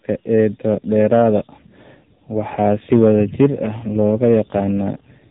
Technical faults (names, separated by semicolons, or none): AMR narrowband mobile codec; hard clipping